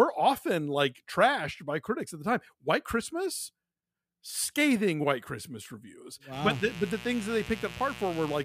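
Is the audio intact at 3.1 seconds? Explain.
Yes, the speech is intact at 3.1 seconds, with no audible fault at that point.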